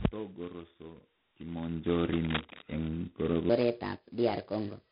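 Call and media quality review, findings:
G.726 ADPCM throughout. Harsh, rasping hiss riding the speech level; nothing above 4 kHz. Heavy quantisation noise fits a 16 kbit/s coding rate.

Cable scratch noise, 2.13–2.67 s. Dense, uneven scratching nearly as loud as the speech. Likely a worn cable or connector moved, contact resistance fluctuating.

Section at the wrong speed, 3.50 s to end. Speech hurried and raised, 1.34 times faster, roughly five semitones up. Likely played against the wrong clock.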